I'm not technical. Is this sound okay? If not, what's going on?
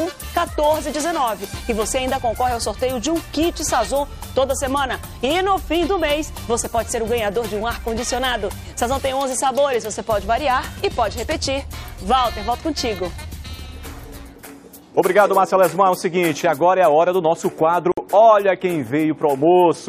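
No. The audio was encoded in separate pieces that were then joined end to end without trimming the extra bits each encoding adds, leaving a gap at a join of encoded pieces. You can hear it at 17.92 s: the sound drops out for about 57 milliseconds, a brief hole with softened edges, ending at 17.97 s. Then it picks up exactly where it left off, with nothing missing.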